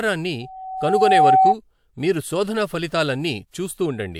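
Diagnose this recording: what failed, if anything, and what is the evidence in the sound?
Loudspeaker feedback squeal in the analogue acoustic path between loudspeaker and microphone. From 0.41 s a single tone at 758 Hz appears over the speech. It swells over roughly 0.7 s. It ends up about 10 dB above the speech level. It stops at 1.56 s. The microphone was picking up the loudspeaker it feeds. At 758 Hz the loop gain exceeded one. That frequency kept growing by itself.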